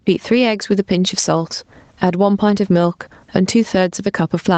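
Gain pumping runs throughout. The gain swings around 15 dB. The likely cause is a fast limiter fighting excessive microphone gain.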